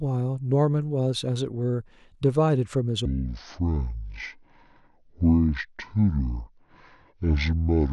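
From 3.05 s to the end at 7.93 s comes a section at the wrong speed. The speech runs at 0.57 times its recorded rate, likely from a clock mismatch, dropping roughly ten semitones and dragging. Spectrogram harmonics sit squeezed lower, and waveform cycles stretch wider.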